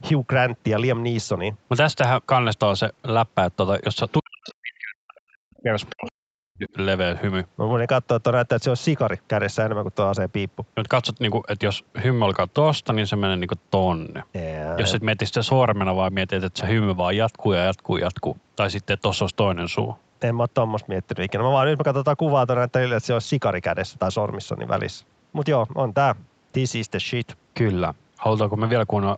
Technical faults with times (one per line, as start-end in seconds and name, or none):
4.19-6.65 speech suppressed in double talk
5.57-6.11 other side's voice leaking through